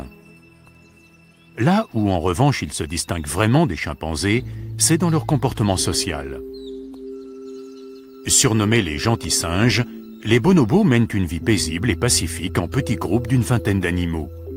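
No technical faults are audible anywhere in the recording.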